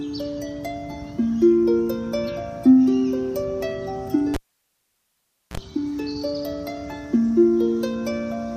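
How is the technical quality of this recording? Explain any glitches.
The recording has one disruptive glitch, a cable pulled and plugged in, from 4.34 to 5.57 s. Unplugging the live lead pops and leaves 1.19 s of near-flat waveform. The tip-only contact then adds 38 ms of 60 Hz mains buzz as a low spectral stripe, and a vertical spike pops at reconnection.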